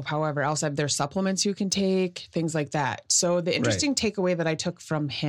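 Nothing in this bit of speech stands out as a technical fault at any point, so there's nothing to flag.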